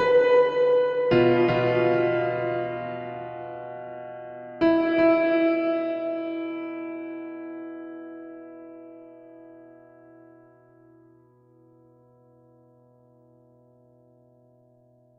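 A clip of everyday sounds with a doubled audio track throughout. Every sound repeats at full bandwidth roughly 400 ms later, about 5 dB quieter. The repeat carries no decay or room colour. The likely cause is a second, slower capture path or an edit holding two offset copies.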